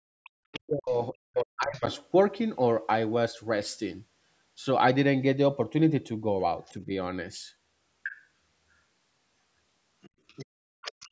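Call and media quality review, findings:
Other side's voice leaking through: second voice at 0.24–0.93 s, 1.77–1.99 s, 8.04–8.12 s, 10.02–10.46 s, 10.82–11.09 s, roughly 10–30 dB under the talker. Likely residual loudspeaker echo the canceller missed. It is an added voice, not a loss of the main one.

Speech suppressed in double talk: talker dips and breaks up 0.62–1.87 s, about 1 s affected, deepest drop about 40 dB, overlapping the leaked far-end voice. Canceller likely ducked near-end speech along with the echo. The talker's own voice drops, unlike the background gating.

Background gated by the echo canceller: room tone drops out 10.46–10.81 s, about 38 dB deep, about 0.3 s, right after the far-end leak ends. Mic suppression held during loudspeaker playback. Only the background vanishes.

Band-limiting to 8 kHz and low-bass removal are consistent with call mic processing. Not a fault.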